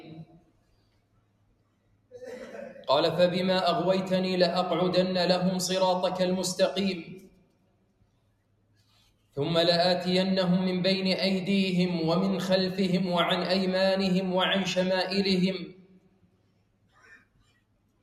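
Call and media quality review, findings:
Noise suppressor applied to music or sounds, throughout. Level swings of around 20 dB: attacks pass, sustained tones, ambience and tails pulled down, giving pumping and thinning. Probable component: speech-tuned noise suppression left active. It classifies steady energy as noise. Unlike AGC, the swings follow how steady the content is, not overall loudness. Unlike a codec, no smearing or metallic artefacts.

Sound cut by the noise suppressor, 0.23–2.16 s, 7.03–9.37 s, 15.58 s to the end. Held or decaying sound sinks by about 18 dB, with decays truncated, while transients mostly come through. Same suppressor treating these passages as noise. Distinct from a dropout: the level is reduced, not silent, with no gap or click at the edges.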